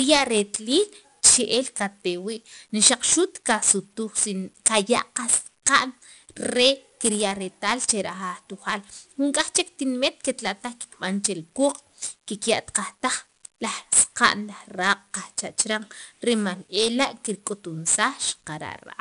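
From start to finish the speech carries 4-bit ADPCM compression. Each sample is coded as a coarse 4-bit step from a prediction, so a gritty hiss rides on every loud syllable and attacks smear. A spectrogram shows level-following broadband noise and nothing above 10.6 kHz, which fits a roughly 22 kHz sample rate.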